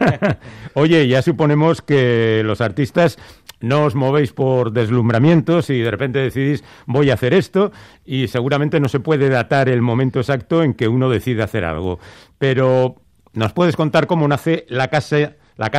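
Twice the audio goes dull and gritty, from 1.45 to 2.51 s and again from 13.98 to 15.71 s, the signature of a Bluetooth SBC bit pool drop. In each stretch the treble falls away and a coarse, grainy noise sits over what remains, then clears as the rate recovers. The loss of top end points to a bit pool cut from about 28 to 12, near 96 kbps, leaving the highest sub-bands starved and the rest roughly quantised.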